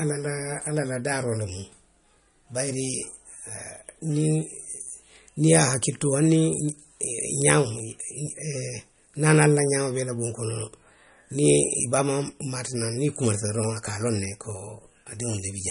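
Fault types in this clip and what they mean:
MP3 compression: The speech was likely squeezed through an MP3 encoder starved of bits, which fits a low bitrate of around 40 kbps. To save data the encoder discards all content above a hard ceiling, so nothing sounds above 10.6 kHz, and it drops weak frequency lines that then flicker in and out between frames. The damage is plainly audible throughout: a dull top end, a watery, swirling texture, and chirpy, metallic s sounds.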